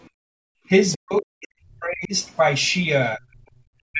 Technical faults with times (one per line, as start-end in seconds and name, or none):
0.10-0.67 background gated by the echo canceller
0.92-0.97 other side's voice leaking through
0.96-2.13 speech suppressed in double talk
3.17-3.49 speech suppressed in double talk
3.91-4.00 speech suppressed in double talk